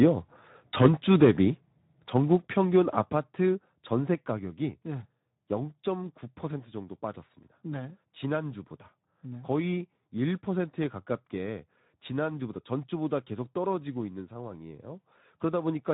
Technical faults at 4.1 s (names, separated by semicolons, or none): Speex codec; microphone volume stepped down